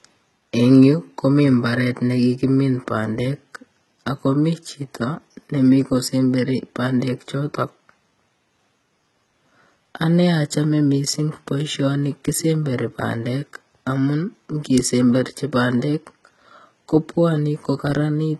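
From start to finish the speech carries a synthetic, metallic treble that points to heavy HE-AAC compression at a very low bitrate, likely around 16 kbps. The lower band sounds coded normally, while everything above it is rebuilt from copied lower content, so s sounds turn gritty and lispy, and nothing reaches beyond about 11.8 kHz. A plain low-pass filter would sound dull; this treble stays bright but misaligned with the true harmonics.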